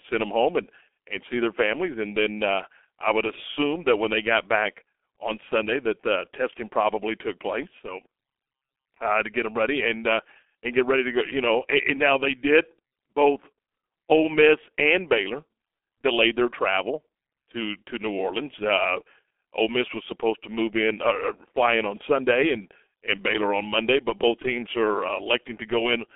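G.723.1 codec damage runs throughout the speech, heavy from start to finish. Nothing survives above 3.7 kHz, within a 300 Hz to 3.5 kHz telephone band. The slow 30 ms frame coding, which fits roughly 6.3 kbit/s, leaves the speech muffled and hoarse, with smeared consonants.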